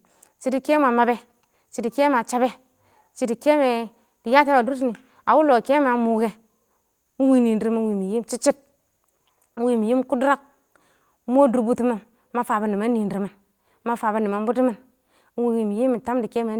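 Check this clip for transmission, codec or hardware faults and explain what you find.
One transmission fault is present. At 9.55 to 9.59 s there is a short concealed packet loss. About 20 ms of the speech never reached the decoder in time. The receiver covered the gap by extending the preceding sound for about 13 ms, then blended back into the real signal. The result is a brief smear in the speech, a wobble, and a short consonant may drop out entirely.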